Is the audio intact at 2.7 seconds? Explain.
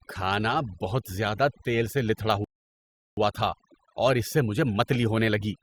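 No. At 2.7 seconds the clip sits inside a rebuffering stall running from about 2.44 to 3.17 s, just after "تیل سے لتھڑا". The player exhausted its downloaded audio and paused until more arrived, so the speech drops to dead silence for roughly 0.73 s and then picks up exactly where it left off. Nothing is skipped, but that time is inserted. A waveform shows a flat-line gap; a spectrogram shows a fully blank vertical band.

The whole recording also carries overdone noise removal, so it applies at this moment too. An over-aggressive noise reducer pulls individual frequency bands down or out whenever they approach its noise estimate, taking the quieter parts of the speech along with the noise. The background becomes near-silent with twinkling specks. On a spectrogram this appears as scattered isolated dots in the background and ragged, holed-out speech harmonics.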